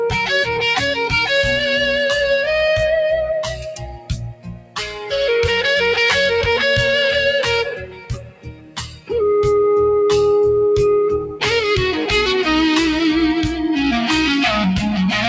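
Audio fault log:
Throughout: noise suppressor applied to music or sounds. A suppressor tuned for speech keeps treating steady, sustained parts of the sound as background noise and pulling them down, so the level swings by around 10 dB as held material and decays sink while sharper onsets pass. Unlike a compressor's pumping, the dips follow how stable the sound is, not how loud it is. The band stops at 8 kHz from the call path, which fits a G.722 link near 64 kbps.
3.41–5.11 s, 7.66–9.12 s, 11.2–11.43 s: sound cut by the noise suppressor. In each span the suppressor singles out a sustained or fading stretch and drives it down far more than the surrounding sound, by up to about 19 dB in the first two and about 12 dB in the brief third. Tails are clipped short rather than fading naturally. Unlike a dropout, the sound is ducked and attacks survive.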